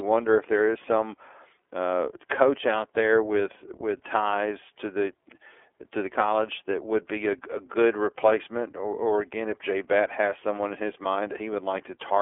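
Throughout the speech, the iLBC codec confines energy to roughly 300 Hz to 3.4 kHz, so a spectrogram shows a hard ceiling and empty floor. Independently coded excitation, fitting 30 ms frames at 13.33 kbps, sounds audibly rough and synthetic, with blurred harmonic striations.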